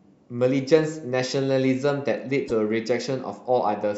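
At 2.44 s the compressed stream carries damaged data: a run of bytes in the file or stream is wrong, so the decoder cannot read the frames there as valid audio. It misdecodes or rejects them, loses its place, and has to hunt for the next frame header before decoding can resume. In the speech this comes through as a brief chirp or squawk lasting about 70 ms, ending at 2.51 s.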